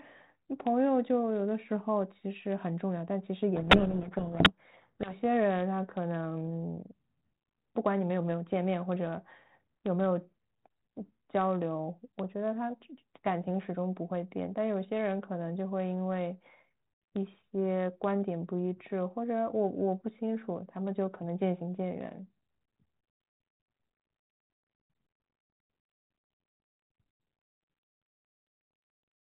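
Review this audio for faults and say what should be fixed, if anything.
From 3.56 to 5.13 s the speech is buried in harsh distortion. This is a codec payload misread. The G.726 stream runs at 32 kbit/s and has only light coding damage. Here its code words are decoded with the bit order reversed. Each word still looks valid. But the decoder applies the wrong difference values, so its adaptive prediction goes astray. Clean decoding returns at 5.13 s. To prevent this, sender and receiver must agree on the G.726 bit packing order.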